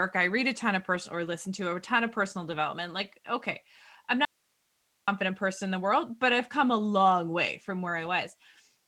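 Packets were lost at 0.91 to 0.97 s, just after "read a ton of", and the next packet's low-bitrate copy filled the hole, so this is a lost packet rebuilt from error correction. The 40 ms rebuild, which fits two 20 ms frames, plays without a gap but sounds rougher and noisier. The same happens at 2.51 to 2.65 s after "a ton of personal", an 80 ms patch that points to four lost frames and gives a longer grainy stretch.

From 4.25 to 5.08 s, after "okay I'm", the speech signal was likely lost somewhere upstream while the path after the break stayed live. The result is an audio dropout to a faint residue. The speech cuts out abruptly for about 0.83 s, leaving only hiss at about 45 dB below the speech. It returns just as abruptly on "person in the world", with no fade in or out.

At 7.85 s a single 20 ms frame is rebuilt from its copy, a moment of roughness.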